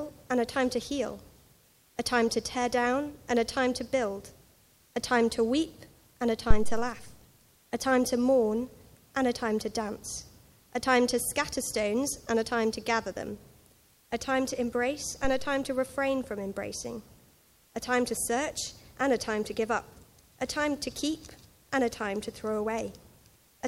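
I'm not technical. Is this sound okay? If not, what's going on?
No. At about 6.51 seconds there is a deep thump, a phantom power thump. Power to the microphone was switched while recording, and that sudden jolt came through as a low bang. It fades in about a tenth of a second and is gone by 7.0 seconds.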